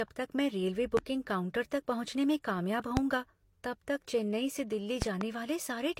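From the start, the speech carries the smeared, swirly texture of transcoding between lossy codecs, likely a low-bitrate HE-AAC encode re-encoded as Vorbis at a moderate rate, so both codecs' artefacts sit on top of each other. The later encoder wastes bits reproducing the earlier damage. On a spectrogram, nothing appears above 16.3 kHz across the whole clip, and the upper bands look patchy and blocky where the two encoders' quantisation overlaps.

At 0.97 to 1.01 s a loud pop hits, about 20 dB above the speech, likely a voltage step from a plug, switch or static discharge that the downstream circuitry has shaped into a short burst. A stronger one, about 25 dB up, follows at 2.97 to 3.01 s. From 5.02 to 5.25 s there are two pops in quick succession, peaking about 20 dB up. The speech continues underneath each one. On the waveform they stand out as tall, narrow spikes, and on a spectrogram as bright vertical lines.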